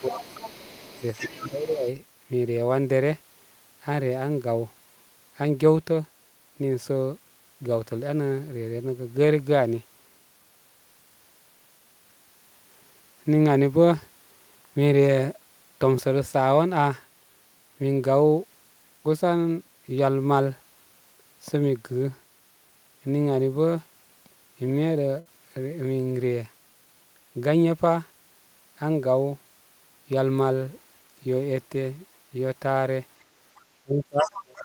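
From the start to 1.89 s, the other side's voice leaks through at about 15 dB below the speech, likely residual loudspeaker echo the echo canceller did not remove. Speech is suppressed in double talk at 0–0.23 s, dipping about 10 dB, and at 1.20–1.87 s, dipping about 15 dB; the canceller likely could not separate near talk from echo and attenuated both.

A burst of packet loss at 25.19–25.27 s is concealed for 60 ms as a held, fading continuation of the preceding sound, then 60 ms of audio is skipped.

Near the end, the other side's voice leaks through at 33.56–33.62 s (about 35 dB down), 34.18–34.37 s (about 15 dB down) and 34.55–34.61 s (about 25 dB down). From 33.83 s to the end, speech is suppressed in double talk, dropping by about 30 dB.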